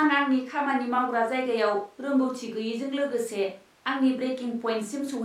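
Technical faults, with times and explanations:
Nothing technical gets in the way here; the speech comes through with no faults to point to.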